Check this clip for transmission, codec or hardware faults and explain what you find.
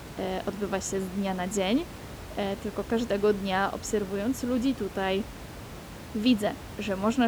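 No transmission, codec or hardware faults can be heard in this speech clip. Room noise sits about 14 dB below the speech, picked up by the microphone as part of the recording itself.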